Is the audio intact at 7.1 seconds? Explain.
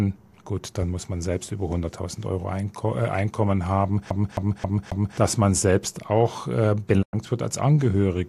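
No. At 7.1 seconds the speech is inside a digital broadcast dropout that runs from 7.01 to 7.15 s. The receiver stopped getting frames it could decode and muted its output. The sound fades out over about 20 ms rather than cutting hard. About 96 ms of programme is missing, which fits four lost frames. The hole is silent. The audio resumes after the gap, but nothing sent during it comes back.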